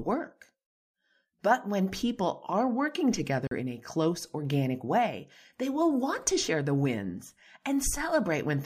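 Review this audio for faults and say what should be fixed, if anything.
Bluetooth dropout from 3.47 to 3.51 s, after "when people are working". The sound goes silent for 41 ms, then resumes at "in a close organic" as if it had played on. This fits two packets that likely reached the headphones too late. Keep the headphones near the source and away from interference.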